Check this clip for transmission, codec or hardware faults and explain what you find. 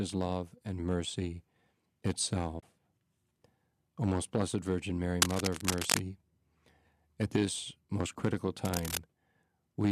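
Two kinds of fault are audible in this speech clip: one short dropout from AAC frame loss with muting, and two bursts of cable scratch noise. The light low-delay AAC compression throughout, consistent with AAC-ELD at about 64 kbps, is part of the transmission path rather than a fault.

AAC frame loss with muting occurs from 2.60 to 2.63 s. About 30 ms of audio is missing, which fits three consecutive 10 ms low-delay frames failing to arrive. The decoder replaced their spectral content with zeros instead of concealing it. Because AAC reconstructs output from overlapping windows, the surrounding good frames taper the level down into the gap and back up after it. The result is a brief soft-edged hole in the speech rather than a hard cut.

Cable scratch noise appears twice. The first burst runs from 5.20 to 6.00 s at roughly the same level as the speech. The second runs from 8.65 to 8.97 s, just after "at this most critical", somewhat below the speech level. 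Both sound like dense, irregular crackling and rustling laid over the signal. The likely cause is a worn cable, connector or control being moved, with its contact resistance fluctuating rapidly and injecting uneven bursts of noise.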